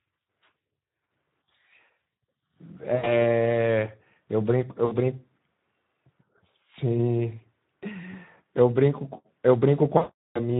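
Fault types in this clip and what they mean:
Speex codec: This is a CELP speech codec from older VoIP and game chat. It models the voice with a filter and a coded excitation. When few bits go to that excitation, the result sounds rough. Here the damage is plainly audible for the whole clip. The speech has a noisy, hoarse edge, and the coarse texture fits a low setting near 11 kbps.
VoIP packet loss concealed by the speech codec: Packets went missing, and the decoder guessed the gaps by repeating its last pitch and filter at falling gain. There are four gaps: 2.95 to 3.16 s, 4.85 to 4.94 s, 8.11 to 8.15 s, and 9.97 to 10.4 s. The lost audio runs from 20 ms to 380 ms. Each gap turns into a buzzy or coloured, fading smear. The longest one, near the end, fades the most, and the sound stays weak or distorted just after it.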